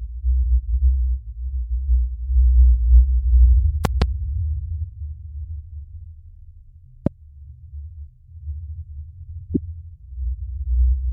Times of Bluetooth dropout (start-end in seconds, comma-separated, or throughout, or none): none